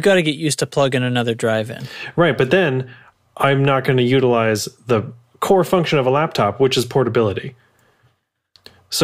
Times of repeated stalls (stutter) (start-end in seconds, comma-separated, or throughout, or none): none